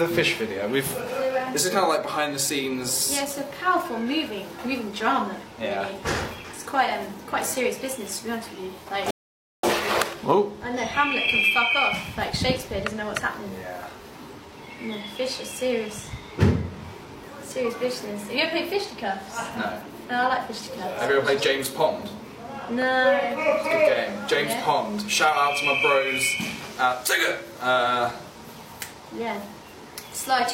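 At 9.1 s the player runs out of downloaded audio, a rebuffering stall: the sound drops to silence until 9.63 s, then resumes exactly where it stopped, adding 0.53 s.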